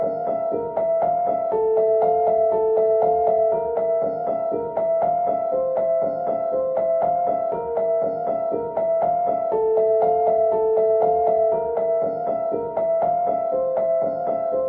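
A recording of sounds with no technical faults to report. Nothing heard in it points to a problem in how the audio was captured, processed or delivered.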